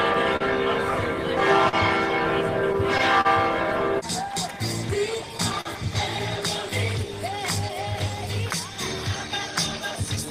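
Throughout, clock drift between sender and receiver is present: the sender's clock runs roughly 4 percent slow, so the receiver keeps starving slightly, unlike a single network hiccup. From 0.13 to 3.27 s, scattered short gaps appear: about seven lost or late packets, each patched by extending the preceding sound, the longest around 40 ms, heard as isolated ticks or smears rather than a steady tempo wobble. From 1.19 to 10.26 s, repeated timing corrections play back at 98 percent speed, repeating short pieces to add roughly 200 ms, an uneven drag that differs from discrete dropouts. At 5.61 to 5.67 s, a short stall from a late packet holds one sound for 43 ms until the packet arrives, a single hold with nothing lost.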